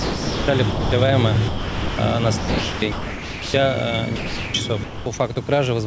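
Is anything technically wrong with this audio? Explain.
Yes. The audio has two related faults, both likely caused by the sender's voice activity detector. Throughout, the sound passes through a call path with no content above 8 kHz, which fits G.722 at 64 kbps.

Sound chopped by the voice detector occurs at 0.00–0.92 s, 2.38–3.54 s and 4.84–5.36 s. The detector likely toggled sending on and off repeatedly, replacing about 0.7 s, 1.06 s and 0.26 s respectively with comfort noise. The result is choppy: the sound has two or more holes filled with comfort noise, unlike a single clean gap.

Sound dropped by the voice detector occurs at 1.48–1.98 s and 4.16–4.54 s. The detector likely judged the sound to be background and stopped sending for one unbroken stretch. That left 0.5 s and 0.38 s of steady comfort noise, with no flicker, until sending resumed.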